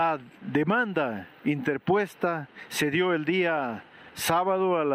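Nothing here calls for comment; there isn't a single glitch, dropout or other technical fault anywhere in this audio.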